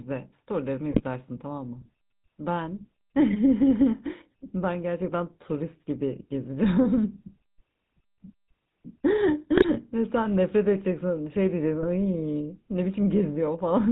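From the start the whole recording carries the GSM full-rate codec: the voice is squeezed through a vocal-tract model with a sparse pulse excitation, nothing above 4 kHz survives, and the plainly audible buzzy, gravelly texture fits a 13 kbps full-rate stream. GSM bit errors break in at 0.90–1.01 s, 9.57–9.91 s and 11.82–11.85 s. Corrupted filter, pitch or gain data turns the voice into brief squawks and gargles. The bursts suggest about five, four and one damaged frames.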